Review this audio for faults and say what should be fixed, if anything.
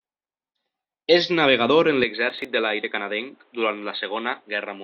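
From 2.04 s, right after "navegador en", to the end, the speech turns dull and boxy with nothing above 4.2 kHz, drops a few decibels in level, and gains a new noise floor well below the signal. There is no gap at the change. The likely cause is that the input switched to a poorer device in mid-recording. Pin the recording to one input device and disable automatic switching, such as to a headset's call profile.

Between 2.30 and 2.45 s, just after "navegador en", a short burst of gritty crackle tears through the sound. This is processor overload crackle. A handful of audio buffers, each around 10 ms, missed their deadlines and were skipped, and each skip left a hard-edged gap. Reduce CPU load during capture or raise the buffer size so every buffer finishes on time.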